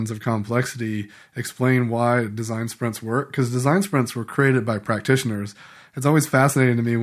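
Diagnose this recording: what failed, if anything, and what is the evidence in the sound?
Nothing in this speech recording gives me any reason to suspect a problem anywhere along the chain, so there's nothing here to diagnose.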